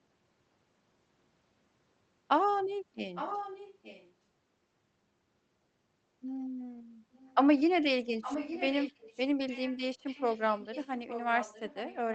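Echo leak appears from 3.14 to 4.13 s, at 7.14 to 7.36 s, 8.21 to 9.2 s, 9.5 to 9.79 s and from 10.06 s to the end. A copy of the speech returns 862 ms late, mostly about 10 dB below it and fainter in the shorter bursts. The likely cause is a far-end loudspeaker whose echo canceller let residual pickup through.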